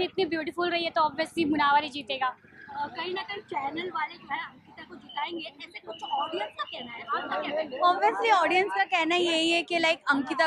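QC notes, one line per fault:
Nothing stood out on listening.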